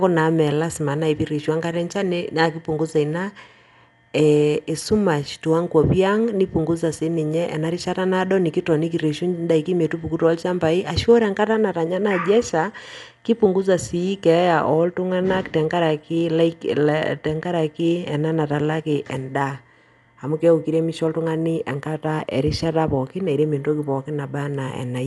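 Throughout the speech, everything above 11.4 kHz is missing and the sound is dull, with a rough, fluttering noise clinging to tones. That noise fill, rather than the swirling of MP3, points to likely Dolby Digital compression, consistent with a 64 kbps stream.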